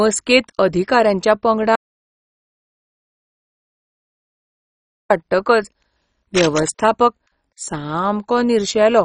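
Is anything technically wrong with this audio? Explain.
Yes, this speech recording has three technical faults.

Throughout, the audio has MP2 compression damage. Nothing survives above 10.4 kHz, so the speech sounds dull, with a gurgling, granular roughness. The likely cause is MPEG Layer II coding at a very low rate, which fits about 32 kbps. With so few bits, the encoder shuts off upper sub-bands entirely and quantises the remaining ones coarsely. The bands flickering in and out give it that watery texture, which a simple low-pass filter would not produce.

From 1.75 s to 5.10 s there is an audio dropout to silence lasting about 3.35 s. The speech cuts off abruptly and later resumes mid-flow. The gap is silent with no room tone at all, which separates it from a pause in speaking or a quiet passage. The likely cause is a lost input, such as a disconnected device, a failed link or an accidental mute, while the recorder kept writing silence. 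Whatever was spoken during that span is gone.

From 6.34 s to 6.70 s there is cable scratch noise, a burst of dense, uneven scratching laid over the speech at a level not far below it. It is likely a worn cable, connector or control being moved, so that its contact resistance jumps erratically. That irregular, rustling texture distinguishes it from a single click or pop, and from steady hiss.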